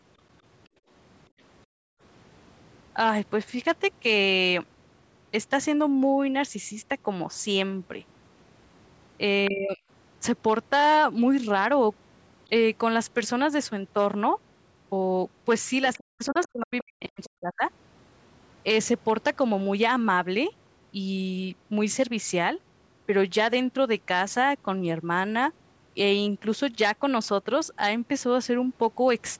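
At 0.68 to 0.89 s and again at 1.66 to 2.01 s, the background is gated by the echo canceller: while the loudspeaker plays, the canceller pulls the microphone down by about 24 dB and then about 40 dB, so the room sound briefly drops away and returns.

At 9.45 to 9.50 s a faint scrap of the other side's voice leaks through, roughly 15 dB below the talker, likely echo the canceller left in. Immediately after, from 9.49 to 9.8 s, the talker's speech dips by around 20 dB, likely suppression during double talk, with the canceller unable to separate the two voices.

The same pattern recurs. A leak at 15.94 to 16.04 s sits roughly 20 dB down. Then from 16.13 to 17.63 s the speech is cut by up to around 40 dB, likely double-talk suppression, and is affected for about a second in total. Inside that stretch, at 17.24 to 17.28 s, another very quiet fragment of the other side's voice, roughly 25 dB down, likely escaped the echo canceller.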